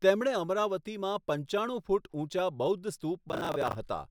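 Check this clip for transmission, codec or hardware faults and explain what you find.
Processor overload crackle affects the speech from 3.29 to 3.75 s. The processor missed its deadline on roughly twenty buffers of about 10 ms each. Each miss replayed old audio with hard edges. The result is a gritty crackle over the speech that stops once the load passes.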